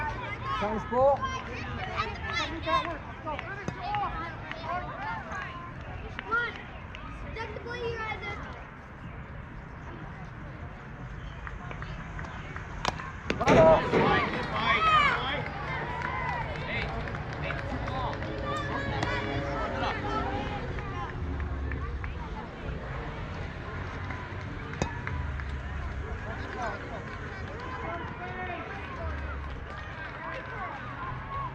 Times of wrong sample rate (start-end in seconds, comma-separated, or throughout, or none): none